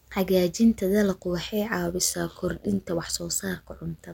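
From 1.86 s to the end, the speech picks up an overlap-add ripple: frames were rejoined with overlapping windows that don't sum to a steady gain, so the level pumps by about 6 dB around 100 times a second, giving a metallic buzz.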